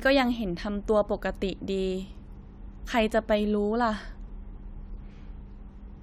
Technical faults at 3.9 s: none

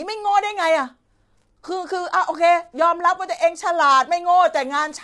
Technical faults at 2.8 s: low-delay AAC compression

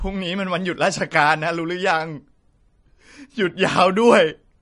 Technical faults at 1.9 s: MP3 compression

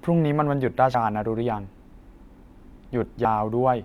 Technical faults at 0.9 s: compressed frames skipped

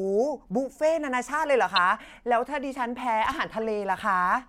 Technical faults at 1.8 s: corrupt frame decoded

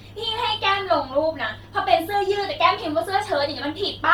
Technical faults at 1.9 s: Bluetooth LC3 compression

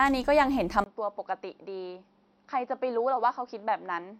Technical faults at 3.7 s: input switched to a poorer device

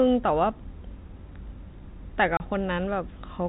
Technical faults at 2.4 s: packet loss filled with silence

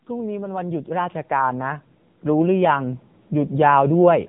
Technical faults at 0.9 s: AMR narrowband mobile codec; automatic gain rising

